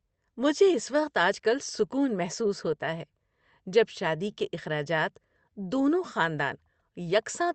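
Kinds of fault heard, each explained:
Clock drift between sender and receiver: Small timing hiccups turn up again and again at uneven intervals, giving the speech a faintly unsteady pace. The sender's audio clock runs roughly 3% slower than the receiver's, so the jitter buffer keeps draining faster than it refills. To avoid running empty, the receiver has to keep stretching the audio it already holds, and those repeated patches are what break the smooth flow.
Repeated timing corrections: From about 0.16 s to 7.45 s the speech plays slightly slow, at about 97% speed, with brief stutters where short fragments are repeated. This is the receiver compensating for the slow sender, inserting material in the same direction each time but at irregular spacing. Over the stretch the repeats add around a fifth of a second in total, heard as small hitches rather than obvious gaps.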